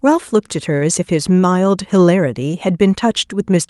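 At 0.77 to 0.83 s, a short stall from a late packet holds the speech for about 35 ms; unlike a dropout, nothing is lost, just briefly stretched.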